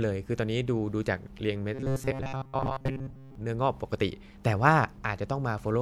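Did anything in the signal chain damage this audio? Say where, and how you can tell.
Yes, from 1.74 to 3.35 s the speech turns into robotic sound from repeated short buffers, a rigid metallic buzz at 134 Hz loosely tracking the words. That's likely the driver or buffer stage starving, looping roughly 7.5 ms blocks through most of that stretch.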